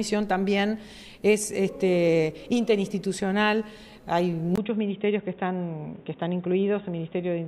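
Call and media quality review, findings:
Input switched to a poorer device at 4.56 s: 20 ms dropout, then dull band-limited sound, nothing above 3.8 kHz, level down about 5 dB, new low hiss. Likely mic-to-headset handover.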